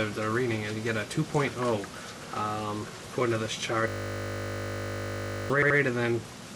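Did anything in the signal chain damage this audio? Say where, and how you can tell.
Yes, two stages failed. At the driver or buffer stage there is a system hang loop from 3.88 to 5.50 s. A single 20 ms slice of sound cycles about 80 times, producing a steady 50 Hz buzz in place of the real audio, so about a second and a half of material is lost. The hardware kept replaying its ring buffer while the host stalled. On a spectrogram this shows as rigid harmonics spaced 50 Hz apart, and the waveform shows an identical 20 ms shape tiled end to end.

At the codec, storage or playback stage there are repeated frames from 5.62 to 5.78 s. A 78 ms block plays three times in a row, heard as a quick stutter. The two extra passes add about 0.16 s to the clip's length. The block size fits three compressed frames being delivered more than once. In the waveform the same segment appears twice more, and the spectrogram shows that pattern repeating.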